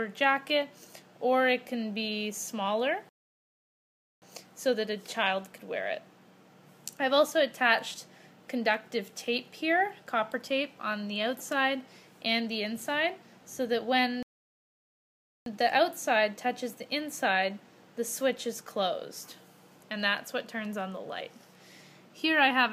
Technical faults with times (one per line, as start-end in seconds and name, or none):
3.09-4.22 rebuffering stall
14.23-15.46 rebuffering stall